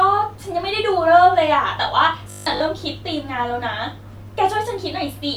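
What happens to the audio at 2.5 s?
At 2.5 s the speech falls into robotic sound from repeated short buffers, running from 2.30 to 2.62 s. A fixed 50 Hz buzz is imposed on the speech, giving a rigid, metallic tone that still loosely tracks the speech. The likely cause is audio arriving too slowly, so the playback side loops the last fragment, about 20 ms long to match that 50 Hz buzz, for most of this stretch while the real audio in between is dropped.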